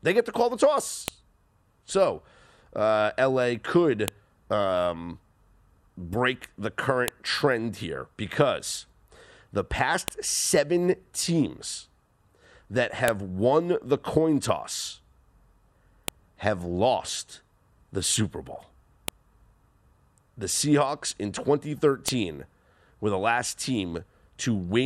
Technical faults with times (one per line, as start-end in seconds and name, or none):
1.08 file header played as audio
4.08 file header played as audio
7.08 file header played as audio
10.08 file header played as audio
13.08 file header played as audio
16.08 file header played as audio
19.08 file header played as audio
22.08 file header played as audio